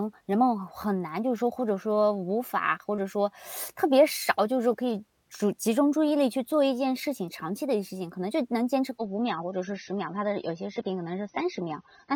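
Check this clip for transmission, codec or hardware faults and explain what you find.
There is one fault: an adaptive stream at a lower bitrate, from 8.98 s to 12.16 s. When the connection slowed, the player switched to a leaner encoding of the same speech, and the switch happens abruptly with no gap. Everything above 6.3 kHz vanishes, so the sound turns dull, which points to a drop from around 96 kbit/s to about 24 kbit/s. Unlike packet loss, nothing goes missing, and unlike a narrowband microphone, the treble limit applies only to this stretch.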